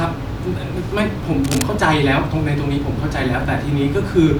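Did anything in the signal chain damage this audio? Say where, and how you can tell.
Yes, in the analogue wiring: from 1.44 to 1.65 s there is cable scratch noise, a rough rustling about 10 dB below the speech. It is likely a worn connector or cable being moved, its contact resistance flickering. On a spectrogram it shows as dense, ragged broadband smears; the waveform shows jagged irregular spikes.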